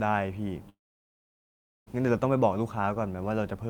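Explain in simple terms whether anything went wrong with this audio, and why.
A long network dropout hits from 0.69 to 1.88 s. After a brief fading trace of the last sound, about 1.1 seconds of silence follows. Audio likely stopped arriving over the connection, so that stretch was lost, and the speech resumes without it.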